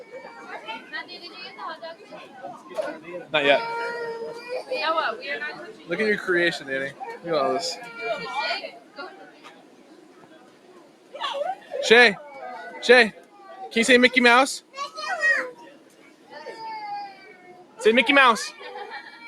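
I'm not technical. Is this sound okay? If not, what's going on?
No. A noise suppressor applied to music or sounds was left switched on. It was built to clean up speech, so it treats steady, lingering parts of this audio as unwanted noise and keeps turning them down, making the level swell and dip unnaturally.

Sound cut by the noise suppressor is heard at 0.04 to 0.39, 1.95 to 2.37, 5.71 to 5.90, 8.69 to 11.14 (the longest), 13.12 to 13.44, 15.58 to 16.33 and 17.14 to 17.79 seconds. There, held or fading sound sinks noticeably and thins out.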